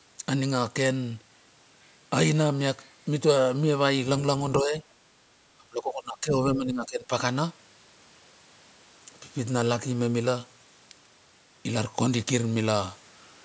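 At 4.62 to 4.74 s, 5.57 to 6.34 s and 6.54 to 7.11 s, the speech dips by up to about 20 dB. This is likely speech suppressed in double talk, with the echo canceller ducking the talker.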